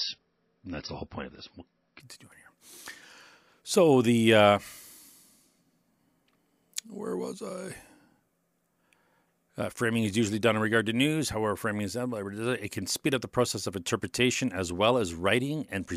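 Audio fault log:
0.00 to 2.00 s: adaptive stream starting at a low bitrate. The speech opens thin and dull, with nothing above about 5.8 kHz and heavier codec artefacts. This fits an MP3 stream of around 24 kbit/s. The player began on a cheap rendition to start fast. At 2.00 s it switched to a better one, which points to about 128 kbit/s. The treble returns at once. There is no gap or dropout at the change.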